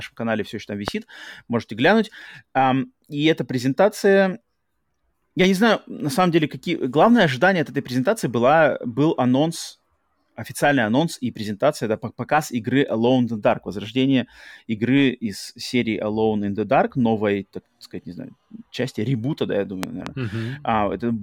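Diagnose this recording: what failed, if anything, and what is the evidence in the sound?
A loud pop at 0.88 s, after "канале все еще там", and a double pop at 19.83–20.09 s, after "части ребута да я", sit roughly 15 dB above the speech, which continues underneath, unlike a dropout. The likely cause is a voltage step from a plug, switch, static or driver glitch.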